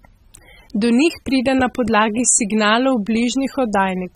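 From start to finish, the speech carries plainly audible codec damage, likely from AAC compression. Nothing sounds above 16 kHz. Too few bits reach each frame, so the spectrum thins and smears. Sustained sounds warble, and sibilants turn fizzy, which fits a low bitrate.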